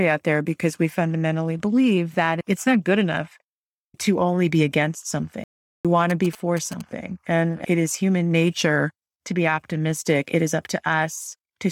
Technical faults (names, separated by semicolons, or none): playback stall; GSM signalling bursts